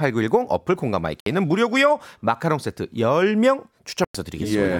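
The speech cuts to silence at 1.20 s for 61 ms and at 4.04 s for 102 ms, resuming as if it had played on. This is likely a Bluetooth dropout from late packets.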